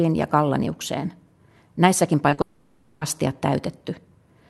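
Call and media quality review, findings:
Short concealed packet loss, 2.29–2.33 s and 2.33–2.39 s: brief smeared wobble on the speech, about 60 ms in total. Jitter buffer or decoder missed two back-to-back gaps of 20 and 40 ms. Concealment extended the preceding sound, then crossfaded back to received audio.

Long network dropout, 2.41–3.03 s: about 0.6 s where the speech turns into a synthetic, decaying buzz or hiss with no true silence. It resumes afterwards with that stretch missing. The likely cause is stalled network delivery, with decoder concealment filling the entire gap. The call codec adds its coding noise and a 12 kHz top end, consistent with Opus at roughly 64 kbps.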